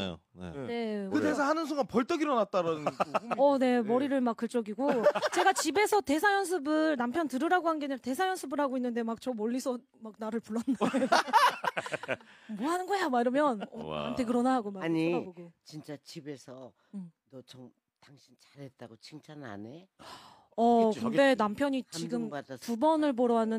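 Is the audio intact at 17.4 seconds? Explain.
Yes, the audio is intact at 17.4 seconds, with no dropout, click, distortion or other fault at that moment.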